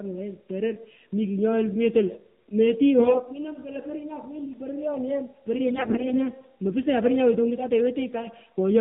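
The whole speech clip carries AMR narrowband mobile codec damage, plainly audible: everything above 4 kHz is gone, and at what sounds like about 7.4 kbps the vocal-tract model is fed so few pulses per subframe that the voice comes out buzzy and synthetic, thin and boxed in.

From 3.00 to 3.21 s, and again from 5.66 to 6.29 s, AMR bit errors appear. Flipped bits in the weakly protected part of each frame slip past the checksum, so the excitation pulses land in the wrong positions and the fine gain and spectral values drift. Pitch and loudness hold roughly steady while the voice turns hoarse, scratchy and gargly. The second burst is longer and rougher, consistent with a bit error rate near 10 percent against roughly 5 percent in the first.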